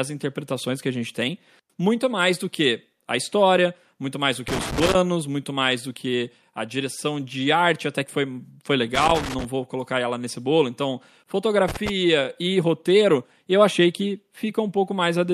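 Loose connector crackle hits at 4.48–4.95 s, 8.95–9.45 s and 11.68–11.89 s. A worn contact keeps chopping the speech, giving short, ragged bursts of scratchy crackle.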